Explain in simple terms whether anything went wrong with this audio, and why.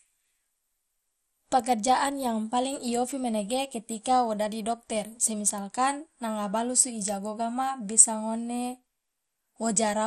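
The speech sounds dull and clearly gurgly from start to finish, with nothing above 14.1 kHz. This is likely MP2 compression, which drops upper frequency bands and coarsens the remaining ones.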